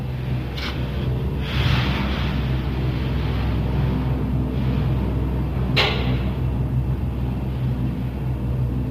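Low-delay AAC compression runs throughout, from start to finish. The audio has a plainly audible grainy roughness, with a noisy haze filling the gaps between tonal components, and nothing at all above 15.6 kHz. The likely cause is a low-delay codec such as AAC-ELD: its very short frames resolve closely spaced frequency detail poorly, so at a rate that fits roughly 32 kbps the encoder smears energy into noise and cuts the top band.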